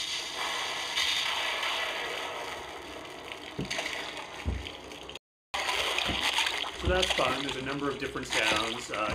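The input was likely lost at 5.17 s, through a dropped link or stray mute, while the recorder kept writing silence: an audio dropout to silence. The sound cuts abruptly to total silence, with no room tone, resuming mid-flow at 5.54 s, 0.37 s later.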